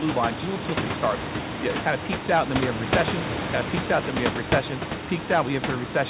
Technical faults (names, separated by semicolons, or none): none